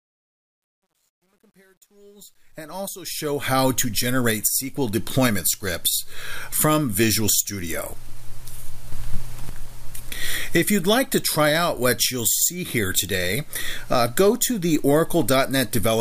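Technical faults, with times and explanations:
0.00–3.52 s, truncation distortion on a fade: the fade-in climbs out of a coarse, gritty texture instead of rising cleanly from silence, and it is roughest from 0.00 to 2.53 s. The level stage is rounding each sample to a small number of steps without dither, which fits roughly 10-bit resolution. At low gain the waveform collapses into a few square steps, and the grit clears as the fade reaches full level at 3.52 s.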